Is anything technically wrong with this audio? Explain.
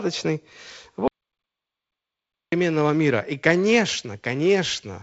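Yes. There is an audio dropout to silence from 1.08 s to 2.52 s. For about 1.45 s the speech stops abruptly and the gap is completely silent, with no room tone. The likely cause is a lost input, from a disconnected device, a failed link or a stray mute, while recording carried on writing silence. Whatever was said in that stretch is gone. The G.722 wideband coding in the path is working normally, with nothing above 7.7 kHz.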